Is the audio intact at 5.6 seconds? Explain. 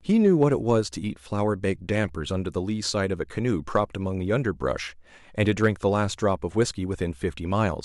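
No, not quite. At 5.6 seconds you're inside a short patch of hard clipping that runs from about 5.42 to 5.68 s. The speech there is driven roughly 3 dB past what the signal path can carry, so the loudest peaks get sliced off flat instead of rounding over. Those squared-off tops throw extra harmonics high into the spectrum, which is why that quarter-second sounds crackly and a bit gritty on its peaks.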